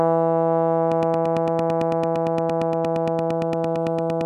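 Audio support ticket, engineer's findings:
Train of clicks, 0.92 to 4.22 s. About 30 near-identical pulses, regular spacing, 8.8 per second, peaking roughly 10 dB above the music and audible in quiet gaps too. Likely cause: interference from nearby equipment or a faulty connection or power supply injecting a repeating pulse. Distinct from vinyl-style crackle or random dropout clicks: even metronomic pace, matching shape each time.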